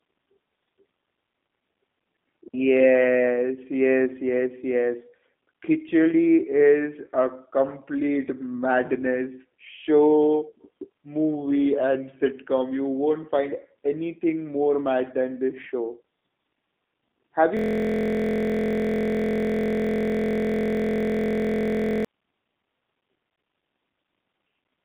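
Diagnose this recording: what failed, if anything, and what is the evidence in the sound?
The codec stage has failed throughout: the speech is band-limited to roughly 200 Hz to 3.6 kHz with nothing above, and it sounds rough and synthetic. That fits a G.729 codec at 8 kbit/s, rebuilding each frame from a vocal-tract filter, pitch prediction and sparse pulses.

At the wireless or network link there is a digital wireless dropout from 2.48 to 2.54 s, a clean 60 ms hole of near silence with no noise burst on either side. The receiver lost too much data and muted with a very short fade.

From 17.57 to 22.05 s a system hang loop sits at the driver or buffer stage: one 23.22 ms slice repeats exactly, producing a steady buzz at 43.1 Hz, which fits a 1024-sample buffer. The host froze while the hardware kept replaying the same ring buffer.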